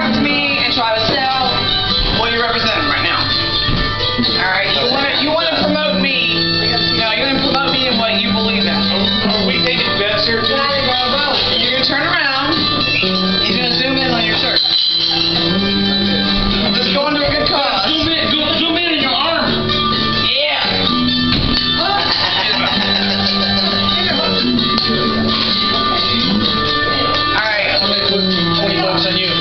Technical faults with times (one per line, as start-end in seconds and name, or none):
none